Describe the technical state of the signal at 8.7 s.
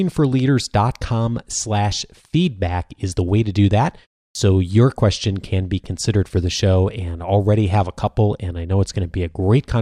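At 8.7 s the speech signal is intact, with no fault present at that moment.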